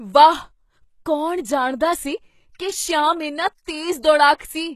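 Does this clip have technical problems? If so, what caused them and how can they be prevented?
Yes. Throughout the speech, the sibilants sound gritty and lispy, with a bright but synthetic-sounding treble that stops entirely at 12.3 kHz. The likely cause is HE-AAC compression at a very low bitrate, around 16 kbps. Band replication has rebuilt the upper spectrum from copied lower bands, so its harmonics do not line up. Plain low-pass filtering would sound dull instead. To prevent it, encode at a higher bitrate, or use a codec mode that codes the full band directly.

From 4.34 to 4.40 s there is pre-echo: a hiss lasting about 59 ms comes before a sharp attack and softens its edge. Quantisation noise from that coding block has spread backward into the quiet moment before the onset. Reverb or echo would trail after the attack, not precede it. To prevent it, use an encoder with proper block switching and give it enough bitrate for transients.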